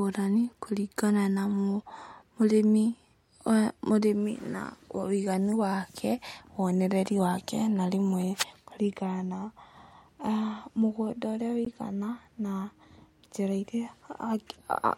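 At 10.27 s and 11.65 s the speech cuts to a block of digital silence, about 5 ms and then 15 ms of silence, typical of an output buffer not filled in time. With no fade at either edge, you hear a sharp tick, then another tick.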